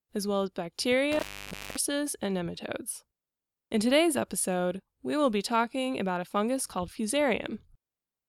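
It's a speech clip with an intermittent contact, likely a loose cable or plug briefly opening, from 1.12 to 1.77 s. The sound drops out for about 560 ms with crackle at either edge and faint hiss in the gap, then comes back right before "and nematodes".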